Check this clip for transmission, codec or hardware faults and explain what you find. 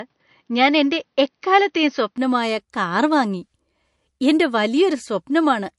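Two faults stand out: a codec problem across the whole clip, and a device change at the start.

Low-bitrate audio saved at a high bitrate: throughout, nothing above about 11.3 kHz, with smeared MP3 artefacts, likely a low-bitrate MP3 re-saved at a much higher bitrate that can't restore what was lost.

Input switched to a poorer device: from 0.0 to 2.18 s the band stops near 6.3 kHz, sounding duller with faint added noise, likely a weaker microphone. It opens up at "കാർ വാങ്ങി" with no gap and no level jump.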